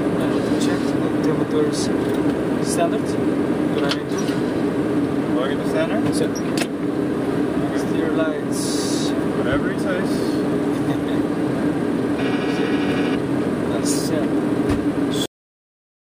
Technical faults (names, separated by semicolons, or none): cut-off end